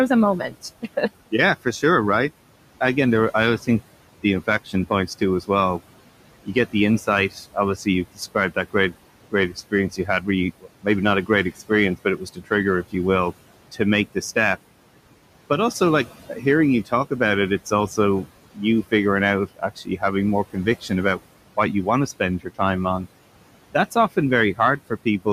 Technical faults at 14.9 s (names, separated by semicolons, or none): hard clipping; noise suppressor artifacts